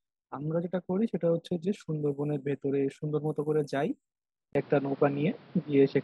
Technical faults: input switched to a poorer device

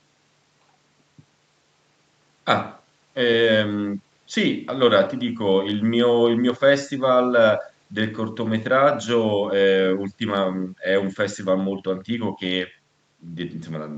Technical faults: none

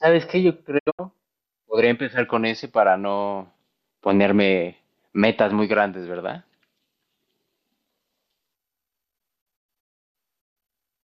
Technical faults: digital broadcast dropout

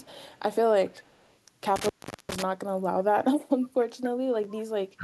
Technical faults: echo leak; intermittent contact; chunks out of order; speech suppressed in double talk

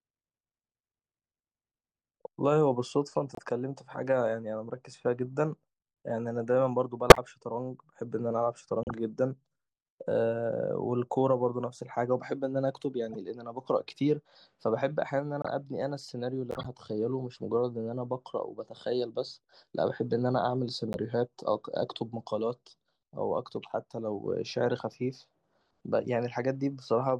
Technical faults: corrupt frame decoded

